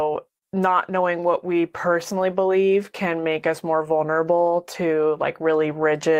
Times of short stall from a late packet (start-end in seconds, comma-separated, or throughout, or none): 0.38-0.45